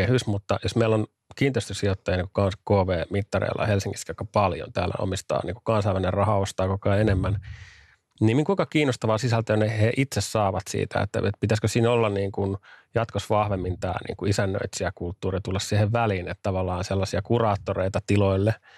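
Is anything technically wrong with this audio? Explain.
No, nothing technically wrong turns up anywhere in this speech recording.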